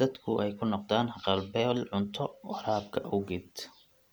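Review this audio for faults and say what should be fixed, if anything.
Nothing to fix: no faults detected anywhere in the speech.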